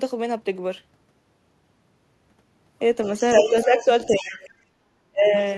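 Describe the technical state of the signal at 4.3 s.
At 4.3 s the other side's voice is leaking through from 4.03 to 4.5 s, sitting roughly 15 dB below the speech, likely loudspeaker echo the canceller left in the microphone. Speech is also suppressed in double talk from 4.07 to 4.38 s: the talker dips by around 10 dB, likely because the canceller turned both voices down.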